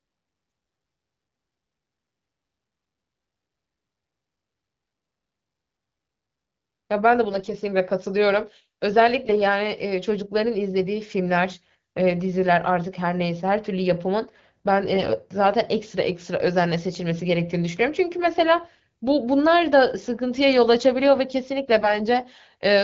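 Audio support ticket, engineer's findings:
AMR bit errors on the AMR-WB link, which sounds like the 12.65 kbit/s mode: a few percent of lightly protected bits flipped, so excitation pulses, gain and spectral values are off. Hoarse, gargly bursts at pitch at 7.28–7.54, 9.26–9.34, 14.94–15.16, 21.80–21.97 s.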